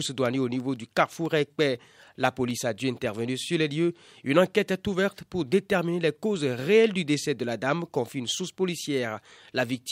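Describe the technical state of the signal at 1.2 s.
Regular ticks cut through the speech at 1.2 s, one every 0.25 s from 0.26 to 2.76 s, ending just before "intervenir sur les lieux". These are periodic USB or driver dropouts: the bus or driver stalls on a fixed cycle, and each time a tiny sliver of audio, roughly a tenth of a millisecond, drops to silence.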